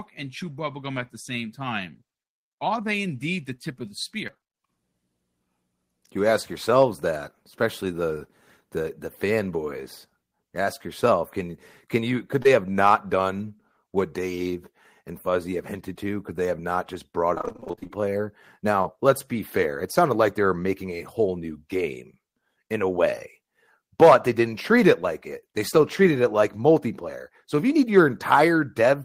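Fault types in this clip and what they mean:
Repeated packet loss (robotic sound): Packets kept going missing, each gap patched by extending the last sound, giving choppy robotic bursts, 8 gaps near 4.3 s, 15 near 17.3 s.
Jitter buffer slow-down: The receiver stretched audio to rebuild its reserve, adding 36 ms, so from 4.55 to 4.81 s speech runs at 88% speed, same pitch.
Short concealed packet loss: About 20 ms never arrived and was filled by continuing the prior sound, a brief smear at 12.43 s and 18.82 s.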